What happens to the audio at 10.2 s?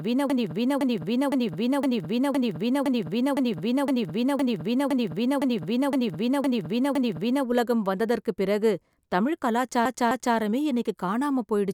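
Repeated frames, 9.86 to 10.37 s: a 256 ms block of compressed audio is played twice more, so the speech stutters and the clip gains 512 ms.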